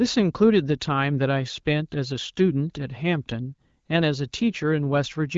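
No technical faults can be heard in this speech.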